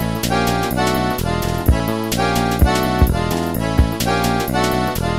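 At 1.80 s and 3.78 s the sound skips, losing about 20 ms each and joining without silence, likely audio missing between chunks at 2-second boundaries.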